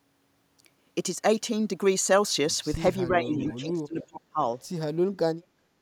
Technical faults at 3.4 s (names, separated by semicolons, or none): speech suppressed in double talk; echo leak